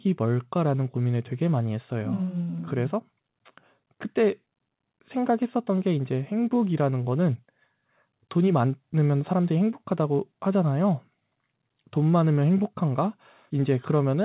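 No faults turn up here; it's just speech carried over a call path, with the narrowband telephone character you'd expect and nothing heard above 4 kHz, which fits a codec like G.711 mu-law.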